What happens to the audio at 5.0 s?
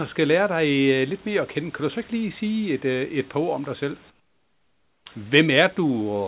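Right after "ord om dig selv", from 4.10 to 5.06 s, the real background gives way to comfort noise, a flat, featureless hiss about 18 dB quieter, likely from discontinuous transmission pausing the sender.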